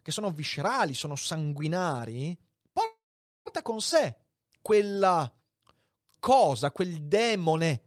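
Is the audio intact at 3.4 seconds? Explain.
No, there's a call audio freeze from 2.85 to 3.48 s, right after "sono viscerali sono sanguinari." The last sound fades out into nearly half a second of silence, likely because delayed packets drained the jitter buffer. The speech then picks up where it left off, about 0.6 s late, with nothing lost.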